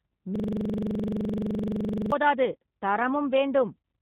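From the first moment to the end, the speech sounds slightly rough and synthetic, with plainly audible codec damage and nothing above 3.8 kHz, giving a narrow, boxed-in tone. This is the G.729 codec, consistent with an 8 kbit/s G.729A stream, which discards the waveform and rebuilds each short frame from a vocal tract filter, a pitch predictor and a handful of pulses. The result stays intelligible but loses natural detail.

From 0.36 s to 2.12 s the sound locks into a hard, mechanical stutter, one fragment of 42.7 ms repeating exactly, about forty times, at 23.4 Hz, close to a buzzy rattle. This is a system hang loop, which fits a 2048-sample buffer. The computer or its audio driver stalled, and the sound hardware kept replaying the same stale ring buffer until normal playback resumed.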